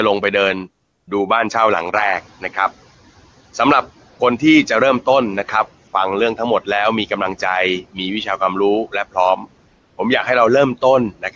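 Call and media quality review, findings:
Call and media quality review, findings:

Noise suppressor artifacts, whole clip. Background pulled down by about 15 dB between phrases, swelling back under speech. Frame-by-frame per-band gain from the call's noise suppressor, attenuating bands it classes as steady noise.

AMR comfort noise, 0.83–1.07 s (240 ms), 4.09–4.19 s (100 ms), 5.87–5.93 s (60 ms), 9.67–9.97 s (300 ms). Real background replaced by smooth, steady synthetic hiss that switches in and out. Sender's voice activity detection declared silence and stopped sending speech frames. Receiver generated noise from coarse level/spectrum parameters.

Noise suppressor catching up, 1.93–2.31 s. Room noise jumps by about 15 dB near 2.0 s and passes through under-attenuated, then sinks over roughly 380 ms as the suppressor's noise estimate adapts, settling at about 12 dB reduction. Lagging noise-floor tracking in the suppressor. 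Wideband codec path itself sounds clean through the transition.

Speech cut by the noise suppressor, 9.36–9.45 s. Brief dip of about 6 dB, roughly a tenth of a second, just before the comfort-noise gap at 9.67 s. Soft speech energy misclassified as noise and attenuated with the background. Sounds swallowed/faint. Suppressor over-aggressive on low-level speech frames.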